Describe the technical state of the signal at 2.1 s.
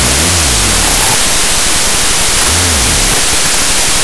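At 2.1 s the signal is affected by a wrong sample width that runs through the whole clip. Audio written as 32-bit float is being read as 16-bit integers, so each sample is split into two values. One value, built from the low mantissa bytes, is essentially random. The other, from the sign, exponent and upper mantissa, keeps only a crude trace of the waveform. The speech is therefore buried in loud, harsh noise and plays at half speed, an octave low. That halved speed and pitch separates it from a byte-order swap, which also sounds noisy but keeps the original timing.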